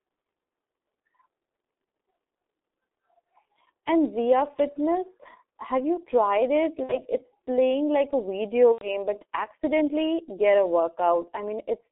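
Throughout, the speech passes through a G.723.1 codec at about 6.3 kbit/s over a narrow 300 Hz to 3.6 kHz line. Its slow, coarse voice model damages the sound heavily, leaving it muffled and hoarse with smeared consonants.

VoIP packet loss concealed by the speech codec appears at 6.84 to 7.03 s, after "have you tried it", where the decoder extrapolates across a gap fitting two lost frames. It recurs at 8.73 to 8.90 s, after "playing like a video", over what sounds like three frames. Each time, the speech stretches into a buzzy tone or coloured noise that fades, and stays weak or distorted into "it's playing like a" and "but accidentally get a".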